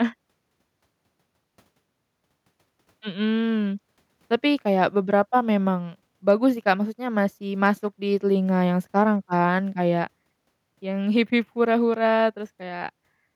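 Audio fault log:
No faults are heard in this speech clip. Nothing in it calls for a timed entry in this log.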